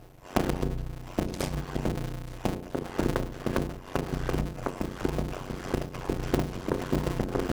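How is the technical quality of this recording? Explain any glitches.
The recording has one serious fault running through its whole length: a block size mismatch (padded). One stage hands over short blocks of audio, which fits 256-sample writes, and the next stage reads larger blocks, around 480 samples, filling the shortfall with silence. A short gap lands in every block, so a steady buzz near 91.9 Hz overlays everything. The sound plays at about 0.53 times normal speed but keeps roughly its normal pitch. On a waveform, evenly spaced near-silent stretches chop the signal about every 11 ms. A spectrogram shows thin vertical gaps at that spacing, plus harmonic lines at multiples of 91.9 Hz.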